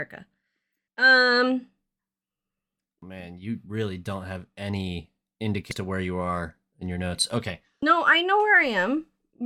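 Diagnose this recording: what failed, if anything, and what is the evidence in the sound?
Damaged data in the compressed stream, a codec-stage fault, produces three brief glitches at 3.02 s (before "man you really don't"), 5.71 s (before "to where you") and 7.82 s. The decoder misreads the corrupted frame, then resyncs, leaving a thin broadband vertical streak on a spectrogram and a sharp waveform discontinuity.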